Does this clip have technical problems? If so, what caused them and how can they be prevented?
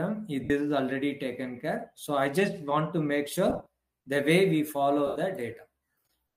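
Yes. Lost LE Audio frames cause gaps at 0.44–0.50 s, 3.50–3.66 s and 5.07–5.16 s. The decoder fills each gap by repeating the last spectrum with random signs, so tones smear into noise. The middle loss is scattered in short runs. A short, interference-free Bluetooth link prevents it.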